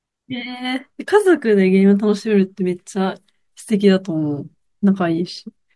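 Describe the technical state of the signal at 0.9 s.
At 0.9 s the speech signal is intact, with no audible technical fault at that point.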